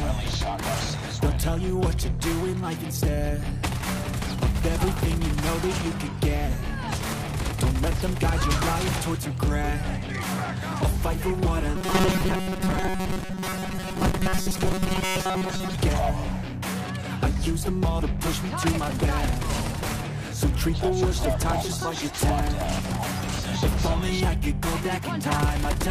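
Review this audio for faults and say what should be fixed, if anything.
From 11.76 to 15.75 s you get robotic sound from repeated short buffers: the audio goes rigid and metallic, with a fixed buzz at 188 Hz riding on top. That's likely the playback path running dry and looping its last tiny chunk, roughly 5.3 ms each, so most of that stretch is repeats while the real audio gets skipped. Worth fixing by giving the buffer more headroom or a sturdier feed so it never underruns.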